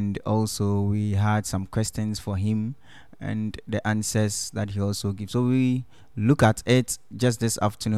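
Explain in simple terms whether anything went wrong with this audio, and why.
Nothing went wrong with this speech recording: the signal stays steady and intact throughout, with no technical faults to point to at any moment.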